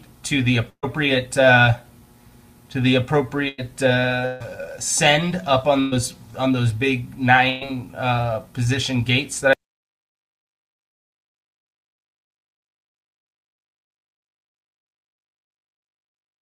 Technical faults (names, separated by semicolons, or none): burst of packet loss; audio dropout to silence